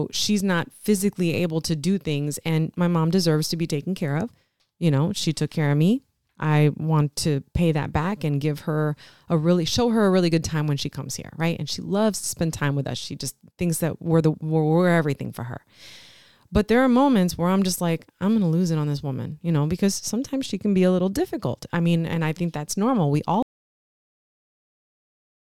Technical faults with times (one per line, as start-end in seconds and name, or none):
23.43-25.41 cut-off end